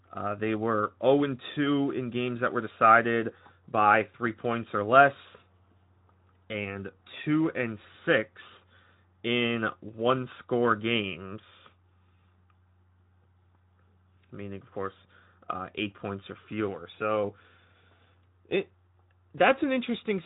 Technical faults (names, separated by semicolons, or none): none